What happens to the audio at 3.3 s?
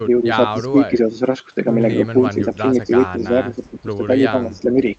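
At 3.3 s the speech dips in level, by about 5 dB at its deepest, with the loss coming in brief patches that add up to roughly a third of a second across the stretch from 2.13 to 3.64 s. This is speech suppressed in double talk, likely triggered because both ends were talking at once. The echo canceller could not tell the near talker apart from the loudspeaker echo, so it attenuated everything it picked up, including the wanted speech.

Over the same moment, a very faint delayed copy of the speech trails behind the original, about 40 dB below it and arriving roughly 0.25 s late, from 2.54 to 3.83 s. This is echo leak, likely from a far end playing the call over a loudspeaker. That device's echo canceller did not fully remove what its microphone picked up, so a quiet residue of the speech was sent back across the call.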